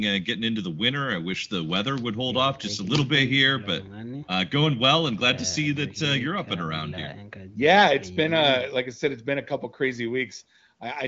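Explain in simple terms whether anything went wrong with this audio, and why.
Nothing went wrong with this speech recording. It carries the sound of an HD Voice wideband phone call, with nothing heard above 7.6 kHz, which is simply the limit of that call format.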